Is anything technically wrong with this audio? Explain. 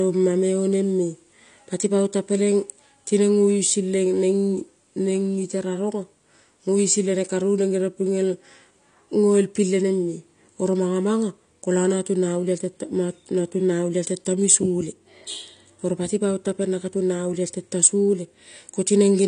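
Yes, the speech carries AAC compression throughout: nothing above 9.8 kHz, with audible warbling smear, likely from AAC-LC at a low bitrate around 32 kbps. Unlike simple low-pass filtering, coarse per-frame quantisation leaves fizzy, swirling sibilants rather than clean dullness.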